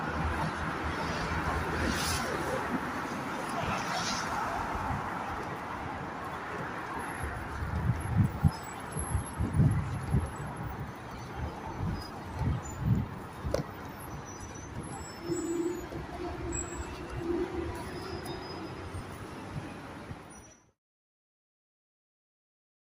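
There are no technical faults to describe in time order; the sound simply eases out gently from about 20.0 s, ending at about 20.8 s.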